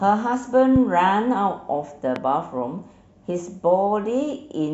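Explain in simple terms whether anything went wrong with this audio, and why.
Two loud pops interrupt the speech, one at 0.76 to 0.78 s and a softer one at 2.16 to 2.19 s. Each is a single sharp click lasting a few hundredths of a second, sitting well above the speech, which continues underneath without a break. The cause is likely a brief electrical jolt, such as a cable being knocked, a switch, or static, which the recording chain then passed on as a short spike.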